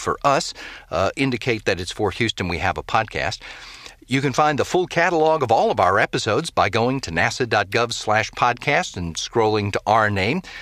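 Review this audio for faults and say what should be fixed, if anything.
A gain stage ran about 1 dB past its ceiling at 1.69 s, just before "it's for", so the tops of that speech peak were sliced flat: hard clipping. Because the overload is slight and brief, the flattened waveform adds a short burst of high harmonics, heard as a single small crackle on that peak rather than sustained fuzz. To prevent it, lower the input or recording gain by a few decibels so peaks keep headroom below full scale.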